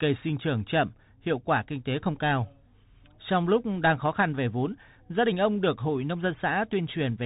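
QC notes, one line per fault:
throughout: Bluetooth CVSD headset codec. Nothing passes above 3.8 kHz. One-bit up-down steps leave scratchy s sounds and granular hiss, fitting a 64 kbps link.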